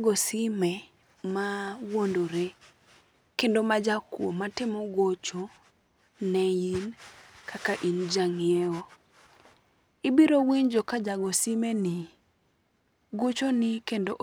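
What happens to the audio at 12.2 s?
At 12.2 s the speech carries a rough, metallic edge that is strongest on the brighter, higher-pitched parts and disappears in the pauses. This is periodic clock jitter, running from 10.39 s to 14.13 s. Interference is wobbling the converter's sampling clock at around 1 kHz, so every component of the sound picks up sidebands spaced about that far above and below it. High frequencies suffer most, which gives the grainy, buzzy coloration.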